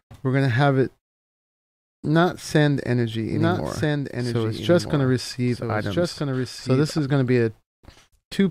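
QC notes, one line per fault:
3.31 to 6.99 s, doubled audio track: a second, full-band copy of the sound runs about one and a half seconds behind the original, roughly 5 dB quieter, with no decay tail or room colouring, so it reads as a flat repeat rather than an echo. It cuts in and out abruptly at both ends of the span. The likely cause is the same audio arriving a second time through a slower capture path, or an edit leaving two out-of-step copies mixed together.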